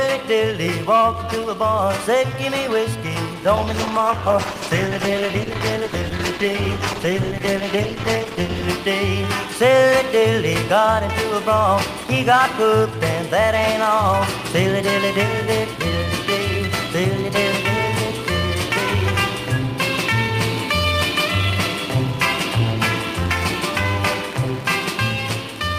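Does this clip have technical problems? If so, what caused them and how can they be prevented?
Yes. A call bitrate drop runs from 3.61 to 8.77 s: the bandwidth estimate fell and the encoder went from 64 to 14 kbps for about 5.1 s. The coarser coding makes the audio rough and muffled. Stabilising network capacity or setting a higher minimum bitrate prevents this.

Mains hum runs from 14.12 to 20.44 s, a steady 60 Hz tone roughly 15 dB below the signal. A ground loop or nearby transformer is coupling the power line into the audio path. Balanced cabling, a single ground point and keeping transformers away prevent it.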